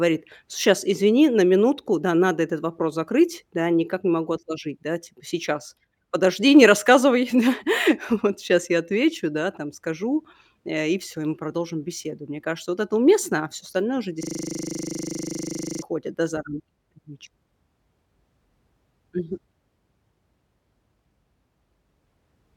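At 14.23 s the speech locks into a system hang loop that lasts until 15.82 s. The machine or its audio driver stalled while the sound hardware kept replaying the same 40 ms stretch of its ring buffer, about 40 times over. It comes across as a rough, machine-gun stutter pulsing at 25 Hz. On a waveform the identical 40 ms shape repeats exactly. A spectrogram shows a frozen, unchanging spectral slice broken by regular vertical seams at each wrap.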